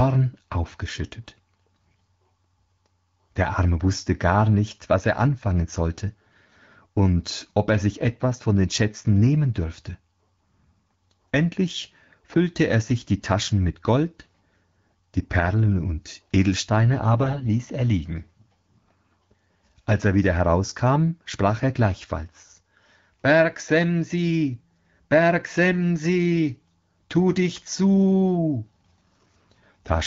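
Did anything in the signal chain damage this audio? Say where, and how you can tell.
Yes, at the network stage. From 17.17 to 17.48 s the speech turns hoarse and gargly but keeps its pitch and level. This points to AMR bit errors at a few percent in the AMR-WB stream's less protected bits.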